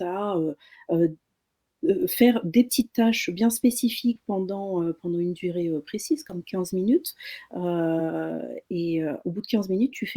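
Compressed frames skipped at 4.15 s, from 6.29 to 6.35 s just after "une durée heu précise", and at 7.99 s in this speech clip. Each time, roughly one 20 ms frame never plays, so the speech jumps ahead.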